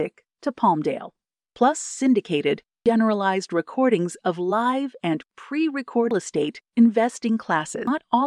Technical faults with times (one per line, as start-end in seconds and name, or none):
0.00 damaged data in a compressed stream
2.86 damaged data in a compressed stream
6.11 damaged data in a compressed stream
7.87 damaged data in a compressed stream